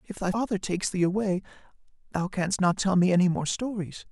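At 0.30 s, lasting to about 0.35 s, the speech is broken by a brief glitch from damaged data in the compressed stream. Corrupted bytes left the decoder unable to read the frames there, so it lost sync and hunted for the next valid frame header before resuming. Unlike a plain dropout, which leaves silence, or a digital click, which is a single sharp tick, this comes from the decoder misreading corrupted frame data.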